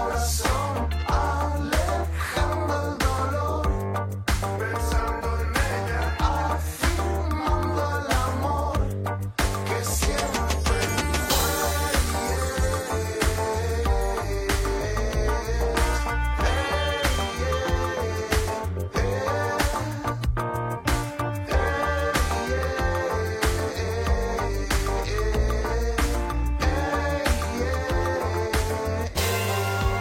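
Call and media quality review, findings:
No faults found on this one, nothing here needs chasing.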